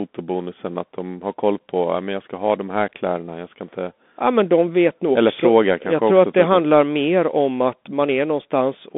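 From start to finish the speech runs through a Bluetooth CVSD headset codec, the one-bit slope-tracking kind, which fits a 64 kbps link. Everything sits in a narrow 200 Hz to 3.5 kHz band, nothing above 3.8 kHz, and the codec's grainy, scratchy damage is plainly audible.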